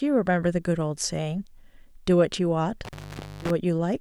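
At 2.85 s the speech drops out through an intermittent contact: a loose cable or plug briefly losing connection. The line stays open for about 0.5 s, with crackle at the break and again at reconnection around 3.50 s, and faint hiss in between.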